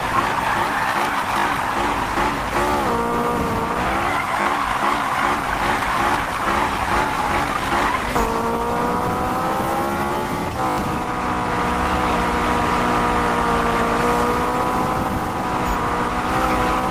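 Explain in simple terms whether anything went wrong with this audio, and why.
Three times the playback stumbled with a repeated buffer: at 1.40 s and 4.42 s a tiny slice of sound plays three times in a row, and at 10.70 s it plays five times. Each repeat is short enough to fit a 20 ms buffer, so it comes across as a quick stutter or buzzy click. New audio arrived late and the device replayed the last piece, losing around 40 ms at the first two points and about 70 ms at the third.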